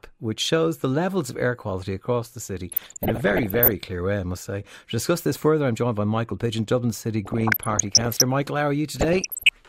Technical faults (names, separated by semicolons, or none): DAB burbling